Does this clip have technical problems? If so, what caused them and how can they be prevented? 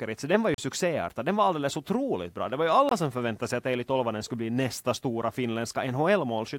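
Yes, two blocks of digital silence: 0.54–0.58 s (38 ms) after "den var ju", and 2.89–2.91 s (23 ms) before "som förväntade sig att". The second fits a 1024-sample buffer. Output went unfilled in time, or a calculation gave invalid numbers. Bigger buffers and catching invalid values prevent it.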